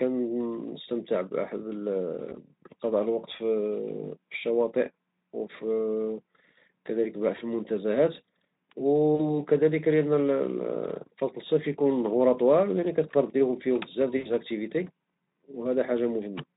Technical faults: VoIP packet loss concealed by the speech codec

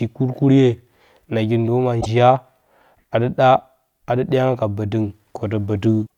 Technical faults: damaged data in a compressed stream

